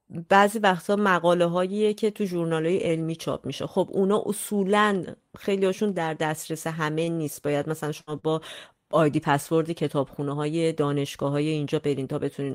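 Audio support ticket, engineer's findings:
Short stall from a late packet, three events: 7.04–7.10 s (30 ms held), 7.13–7.20 s (36 ms), 8.19–8.26 s (42 ms). Speech sound sustained with a faint buzz, then resumes where it stopped, with nothing lost. The jitter buffer ran dry and the receiver stretched the last frame until the packet landed. Spectrogram: harmonics frozen flat for tens of ms. Waveform: one repeating cycle, slightly lower level. Playout delay grows by the same 30–42 ms each time.

Burst of packet loss, 8.01–8.10 s. About 60 ms of speech missing, covered by 64 ms of concealment. The receiver extrapolated the last sound and faded it across the gap, so it is heard as a fading held sound, then speech picks up further on. Component: packet loss concealment after consecutive packets failed to arrive or arrived too late. Spectrogram: smeared, steady harmonics dimming toward the gap's end, then an abrupt change of spectral content. 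Waveform: shrinking periodic envelope, then a discontinuity.

Jitter buffer speed-up, 11.77–12.25 s. Speech runs about 10% fast at unchanged pitch and sounds hurried. Total trimmed is about 50 ms. Cause: the buffer was over target, probably after bunched packet arrivals, so playout dropped pitch-period-length segments repeatedly to reduce delay. Spectrogram: harmonic spacing unchanged, but the time axis is compressed and syllables are shorter. Waveform: small splices at period boundaries, with an otherwise continuous envelope.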